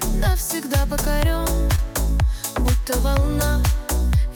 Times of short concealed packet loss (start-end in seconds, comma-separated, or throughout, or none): 1.75-1.79